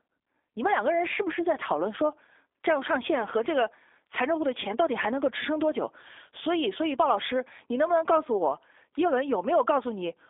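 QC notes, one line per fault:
Throughout, G.729 codec. The speech sounds narrow and slightly rough, with a synthetic edge that is plainly audible. Nothing reaches above about 3.7 kHz, and the low end thins out below about 300 Hz, a telephone band of roughly 300 Hz to 3.6 kHz. The codec rebuilds each short frame from a vocal tract model, a pitch predictor and a few pulses. The fine detail between those pulses is lost. The sound fits G.729A at 8 kbit/s.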